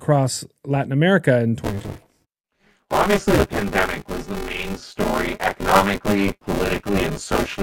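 From 1.64 s to the end, the speech carries a robotic 200 Hz buzz, present only with signal. This is buffer tearing: the ring buffer's writer and reader have slipped, so roughly two fifths of each period replays audio about 20 ms old, joined hard.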